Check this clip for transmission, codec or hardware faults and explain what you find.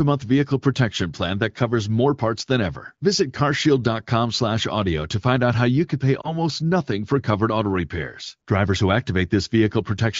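One transmission fault stands out. From 6.21 to 6.35 s the speech briefly dips or warbles, the mark of lost AMR speech frames: the wideband decoder bridges a corrupted frame by repeating prior pitch and vocal tract settings at reduced gain, pointing to a single lost frame.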